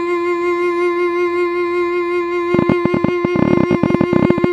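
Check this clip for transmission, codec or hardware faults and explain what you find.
A train of clicks runs through the music from 2.54 s to 4.45 s. Around forty sharp pulses arrive at about 19.5 per second, unevenly spaced and peaking roughly 15 dB above the music, likely from electrical interference or a struggling interface. They sound like rapid, irregular ticking. A waveform shows narrow spikes, and a spectrogram shows thin vertical broadband lines.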